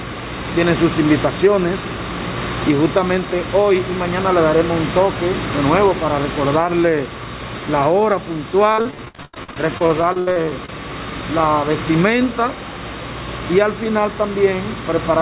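Audio carried over a narrowband call path, with nothing above 4 kHz, which fits G.711, shows repeated packet loss with a robotic sound from 8.72 to 10.69 s. Lost or late packets leave gaps up to 80 ms, each patched by stretching the previous sound, so about 37% of that stretch is concealed. On a spectrogram this looks like smeared, repeated vertical slices; the waveform shows choppy, broken segments.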